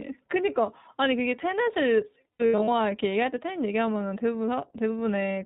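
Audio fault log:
throughout, iLBC codec: the whole clip is band-limited to narrowband, with nothing above 4 kHz, and plainly audible codec damage gives the speech a rough, slightly synthetic edge. Each 20 ms frame's excitation is coded on its own, which fits a rate near 15.2 kbps.
2.33 to 2.69 s, lost iLBC frames: about 240 ms of frames went missing, scattered over 360 ms, the longest gap around 70 ms. The decoder filled each hole by repeating the last pitch cycle mixed with noise, heard as brief buzzy held vowels, then recovered almost at once.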